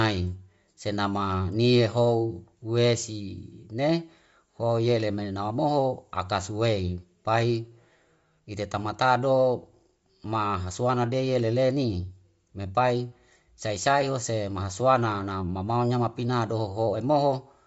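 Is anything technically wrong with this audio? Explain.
Yes. Throughout the speech the sound is dull and band-limited, with nothing above about 7.7 kHz, and the upper range carries a breathy, grainy texture that is plainly audible. This points to Bluetooth LC3 compression as the likely cause. LC3 is a transform codec working in short frames, and at a low rate it discards much of the upper spectrum and fills those gaps with noise. The damage here fits roughly 32 kbps with 10 ms frames.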